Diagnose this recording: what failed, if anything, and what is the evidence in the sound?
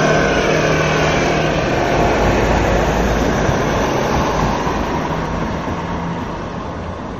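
The codec stage failed here, with likely MP3 compression at a low rate all the way through. There's nothing above 12.5 kHz, and the sound has a watery, swirly texture with smeared attacks, plainly audible damage that fits a bitrate around 44 kbps.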